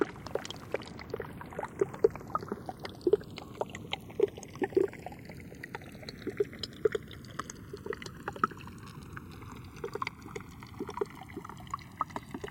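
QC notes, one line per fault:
Throughout: channels drifting apart. The two sides run on clocks roughly 100 ppm apart, so their offset grows steadily to about a millisecond. Summed to mono, comb notches sweep slowly, heard as slow flanging. Unlike a fixed offset or a flanger effect, this sweep moves one way and never cycles back.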